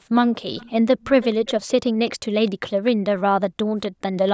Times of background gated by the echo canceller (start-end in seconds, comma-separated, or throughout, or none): 3.90-4.01